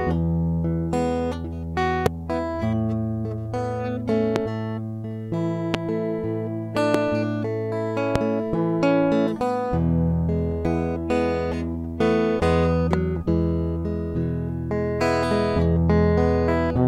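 Loud pops hit at 2.06–2.09, 4.36–4.39, 5.74–5.77, 6.94–6.97 and 8.16–8.18 s. Each is a single sharp spike, far above the music. A voltage glitch is the likely cause.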